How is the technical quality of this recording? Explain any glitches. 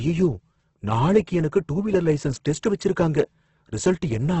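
The quality is poor: heavy Opus compression degrades the speech for the whole clip. The sound is rough and grainy, with a noisy, hissy texture in place of clean harmonics, and nothing survives above 8.2 kHz. The likely cause is Opus in its music (CELT) mode at a very low rate, around 12 kbps, filling starved bands with folded or noise content. A spectrogram would show a hard ceiling at 8.2 kHz and smeared, speckled harmonics below it instead of crisp lines.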